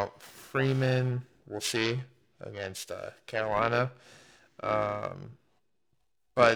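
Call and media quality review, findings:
Periodic clock jitter, whole clip. Rough, metallic edge on the speech. Gone in pauses. Probable component: converter clock, disturbed by interference. Clock timing wobbles at around 1 kHz. Each frequency in the speech gains sidebands about 1 kHz above and below. Worst on higher frequencies, so sibilants and upper harmonics sound grittiest.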